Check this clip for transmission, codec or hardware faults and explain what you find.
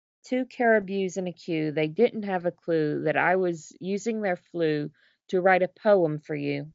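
I find no faults to explain in this clip.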